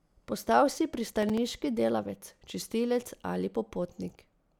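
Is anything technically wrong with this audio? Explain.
Yes. From 1.12 to 1.38 s, processor overload crackle tears through the speech. Several roughly 5 ms buffers miss their deadlines, leaving hard-edged silent gaps heard as gritty crackle.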